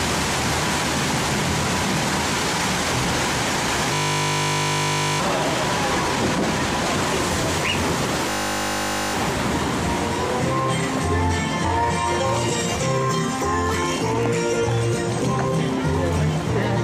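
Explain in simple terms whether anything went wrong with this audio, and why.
A steady, harsh buzz replaces the sound from 3.94 to 5.2 s and again from 8.3 to 9.14 s. This is a system hang loop: the computer briefly froze, and the hardware kept replaying one 20 ms scrap 50 times a second, losing about a second or more each time.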